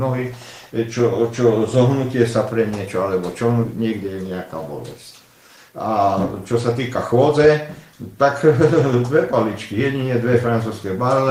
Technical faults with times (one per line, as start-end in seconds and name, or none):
3.65-3.67 skip ahead
3.77-4.31 jitter buffer speed-up
4.97-6.05 jitter buffer speed-up
6.52-9.10 jitter buffer speed-up
9.72-10.27 jitter buffer speed-up